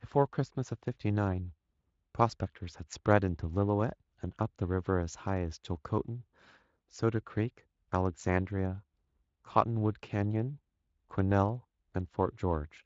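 No technical faults are audible.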